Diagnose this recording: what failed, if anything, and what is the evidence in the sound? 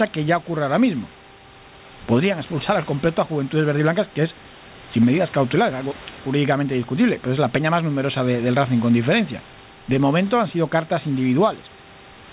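Nothing failed; no fault is audible in this speech.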